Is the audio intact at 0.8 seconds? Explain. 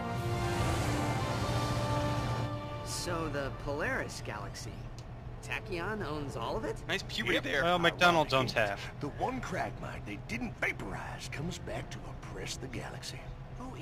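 No. At 0.8 seconds, as through the whole clip, there is crude rate conversion. The sample rate was changed without a proper filter, simply dropping the nearest sample, which fits a 48 kHz to 44.1 kHz conversion. This leaves an error roughly 25 dB below the signal, heard as a gritty, inharmonic fizz riding on loud and high sounds. A spectrogram shows faint stray lines unrelated to the real harmonics, and a waveform zoomed in shows small periodic jumps.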